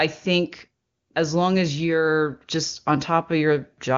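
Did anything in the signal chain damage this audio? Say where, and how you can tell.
No, the speech comes through intact, and its AMR wideband (HD Voice) stage leaves at most faint coding damage, with the full band up to 7 kHz holding steady in a way that fits the codec's top 23.85 kbit/s mode.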